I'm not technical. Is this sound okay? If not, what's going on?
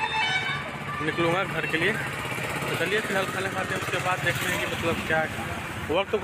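Yes, this sound is okay, and there's nothing going on with it that needs fixing.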